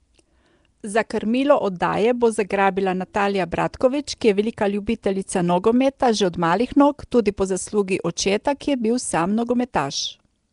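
From start to finish the speech carries a rough, hissy halo and a smeared, underwater texture, plainly audible throughout. This points to Nellymoser compression, likely from Flash's old microphone codec, where a fixed, coarse bit budget leaves weaker bands unfunded and filled with noise. The damage level fits a rate around 44 kbps. On a spectrogram, nothing appears above 10.6 kHz, and the bands below show grainy, noise-like patches with blurred harmonic detail.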